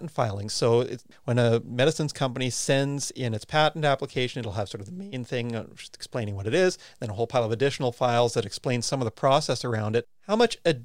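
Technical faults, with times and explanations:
Nothing in this speech recording stood out as a technical problem on listening.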